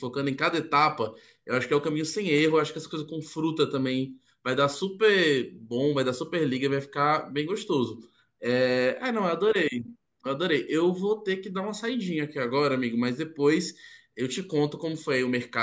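No technical faults are audible anywhere in the speech recording.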